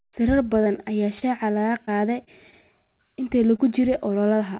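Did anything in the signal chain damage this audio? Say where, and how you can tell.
Yes, the damage is on the network side of a call, with the packets feeding the decoder. The audio sits under a hard 4 kHz ceiling, which fits a narrowband G.711 A-law call at 64 kbps.

There's short concealed packet loss at 0.64 to 0.68 s, 1.19 to 1.23 s and 3.56 to 3.60 s. Each is a brief smear where roughly 20 ms of real audio never arrived in time. The decoder kept extending the last bit of sound to cover the hole, then crossfaded back, so a tiny piece of speech just isn't there.

At 0.76 to 0.79 s there's a short stall from a late packet. Nothing's actually missing here. The jitter buffer ran dry, so the receiver held the current sound for about 17 ms until the packet turned up, and then carried on from the same spot. You hear a sound drawn out a touch too long with a faint buzzy dip, and playback runs about 17 ms later from then on.

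From 1.85 to 2.54 s it gets choppy and a bit robotic. That's repeated packet loss: four separate gaps, the longest 26 ms, totalling about 60 ms of lost audio, with around a tenth of that stretch patched over. Each hole gets filled by continuing the previous sound, and the next one follows before things settle, which produces that choppy, broken texture.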